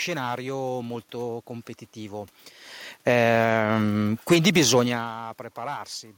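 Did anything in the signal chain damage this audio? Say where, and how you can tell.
Yes. An automatic gain falling fault comes from the call-processing stage, from 2.92 to 4.57 s. The control judged the level too high and pulled its gain down by about 6 dB over that stretch. Unlike the talker shifting position around 2.5 s, this drop takes the room noise down with the speech. On a waveform the envelope and the noise floor taper together. A spectrogram shows the whole band, background included, dimming evenly.

The same processor also produces an automatic gain rising fault, from 3.35 to 3.93 s, nested inside the longer fall. Here it briefly reversed direction and lifted the gain by about 4 dB, so speech and background swell together for roughly half a second before the downward trend resumes. The waveform shows a short bulge in the envelope, noise floor included. The spectrogram shows a matching brightening across all frequencies. 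That overall lift is what separates it from the later change near 5.0 s, where only the talker's distance to the microphone varies.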